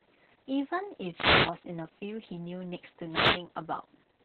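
From start to finish, the speech carries heavy Opus voice compression. Nothing is heard above 4.3 kHz, so the band is narrowband. The voice sounds muffled, hoarse and slightly robotic. That points to the SILK coder at a very low bitrate, around 6 kbps, with coarse excitation.

From 1.13 to 1.57 s, a wireless microphone noise hit occurs. The radio signal fades as reflections cancel, and receiver noise surges over the voice. It sounds like a short swish of static. A second hit, from 3.07 to 3.44 s, sounds the same.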